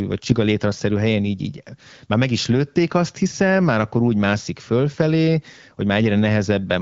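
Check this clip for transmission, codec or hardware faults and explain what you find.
No transmission, codec or hardware faults are present here.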